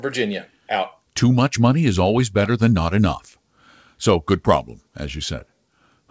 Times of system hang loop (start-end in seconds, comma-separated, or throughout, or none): none